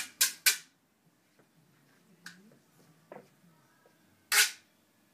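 No technical faults can be heard in this audio.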